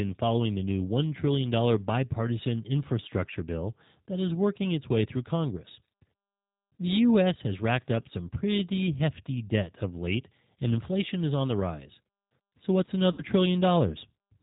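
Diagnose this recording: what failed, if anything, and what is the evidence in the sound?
A rough, slightly synthetic quality runs through the whole speech clip, with nothing above 4 kHz, which points to the G.729 codec at 8 kbit/s. At the codec stage, each 10 ms frame is rebuilt from a vocal tract filter, a pitch predictor and sparse pulses, giving this plainly audible damage.

From 13.12 to 13.23 s the sound smears into a buzzy tone or coloured noise that fades, and stays weak or distorted briefly afterwards. This is VoIP packet loss concealed by the speech codec. About 60 ms went missing, which fits three lost 20 ms packets, and the decoder extrapolated from its last pitch and filter while lowering the gain.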